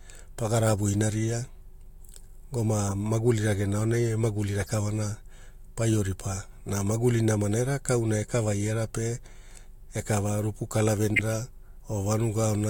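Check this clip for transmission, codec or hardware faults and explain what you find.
One kind of fault turns up three times in the speech. Corrupt frame decoded, at 2.88–2.91 s, 4.59–4.70 s and 11.14–11.19 s: the decoder played damaged compressed frames, putting energy at the wrong frequencies. Each is heard as a brief chirp, squeak, blip or burst of noise, and the last is loudest, at about -10 dBFS.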